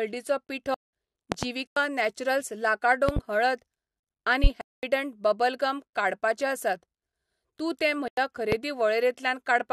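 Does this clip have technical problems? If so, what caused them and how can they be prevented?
Yes, two kinds of fault. Blocks of digital silence hit at 0.74–0.93 s (186 ms), 1.67–1.77 s (93 ms), 4.61–4.83 s (218 ms) and 8.08–8.17 s (93 ms). The speech drops straight to silence and back. Three of those lengths fit 8192- and 4096-sample buffers that weren't filled in time. A bigger buffer or a higher-priority audio thread would stop that.

There are also loud pops sitting on top of the speech. You get double pops at 1.32–1.47 s (about 20 dB above the signal) and 3.09–3.20 s (about 15 dB), and single ones at 4.44–4.48 s (about 15 dB) and 8.52–8.56 s (about 20 dB). They're likely voltage spikes from a cable, switch or static discharge. Secure the connections and ground the gear to prevent them.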